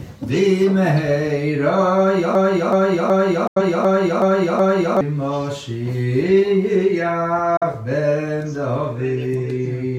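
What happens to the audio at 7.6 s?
The sound fades to silence over about 8 ms and drops out from 7.57 to 7.63 s, a digital broadcast dropout: the receiver muted a corrupted stretch, which fits a single lost frame.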